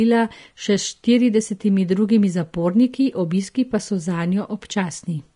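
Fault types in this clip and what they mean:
Vorbis compression: the speech sounds hissy and grainy throughout, with nothing above about 10.6 kHz, so the top end is simply gone. That's most likely a low-quality Vorbis encode, where the codec pulls the cut-off down and quantises what treble is left so coarsely that the fine detail turns into noise-like texture. The damage is plainly audible, which points to a low bitrate somewhere around 36 kbps, and consonant edges come across blurred.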